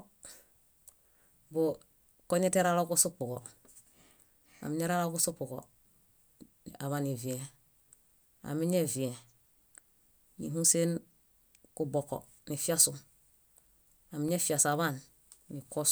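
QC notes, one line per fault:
10.27 to 14.28 s, periodic USB or driver dropouts: something on the host appears to be stalling the USB bus or audio driver on a fixed 2.0 s cycle, and each stall loses roughly a millisecond of the speech, which is replaced by silence. Across this span that gives about three short gaps, each heard as a small tick or pop at a steady spacing, since an abrupt cut to silence mid-signal produces a brief click.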